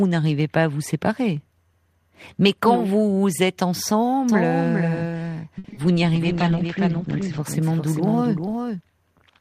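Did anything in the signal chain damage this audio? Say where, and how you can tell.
Yes. From 4.29 s to 8.81 s a doubled audio track runs under the speech: a full-band copy about 5 dB quieter trails the original by roughly 400 ms, with no decay or room colour, and it cuts in and out abruptly at both ends. This is likely a capture or mixing-stage fault, with a second, slower path feeding the same signal into the mix. On a waveform every syllable has a smaller twin shifted right; on a spectrogram the whole pattern appears ghosted.

Between 5.58 s and 5.77 s there is repeated packet loss, and the sound goes choppy and robotic. There are about five short holes, the longest roughly 60 ms, and each is patched by stretching the previous sound, so more than half of that 0.19 s stretch is synthetic fill. This is a network-stage fault. The spectrogram shows smeared, repeated slices with sharp seams, and the waveform shows recycled cycles between clean fragments.

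From 6.16 s to 7.49 s a call bitrate drop makes the speech rough and muffled. The coarser coding fits the encoder being pushed from around 32 kbps down to about 13 kbps, bottoming out for roughly 1.25 s, while the audio bandwidth shrinks from 20 kHz to 8 kHz. This happens at the call-processing and codec stage, after the bandwidth estimate falls. On a spectrogram, everything above 8 kHz goes blank and the remaining energy looks blocky and smeared until the higher rate returns.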